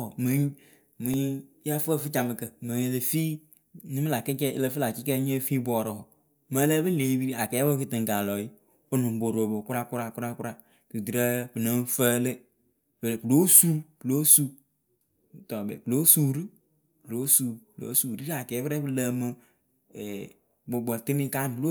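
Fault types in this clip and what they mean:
Block of digital silence: around 1.14 s the speech drops to silence for only about 0.73 ms, consistent with a 32-sample block left unfilled, and the hard edges give a tick; the waveform shows a tiny flat gap, the spectrogram a thin full-height vertical line.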